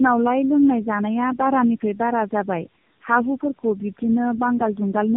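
Right from the start and all the way through, the speech carries tandem speech coding damage. It sounds like it went through three low-rate speech coders in a row, which fits a chain like AMR-NB into G.729A into AMR-NB again, decoded and re-encoded at each hop. Each coder is modelling artefacts the previous one left behind, so the errors stack. You get a rough, warbly, muffled voice, and nothing comes through above about 3.6 kHz.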